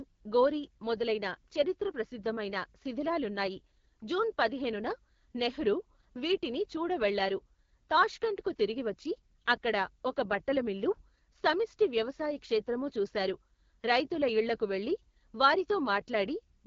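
Throughout, AMR wideband (HD Voice) codec damage roughens the speech into a raspy buzz fitting the 8.85 kbit/s mode; the spectrogram is blank above 7.5 kHz.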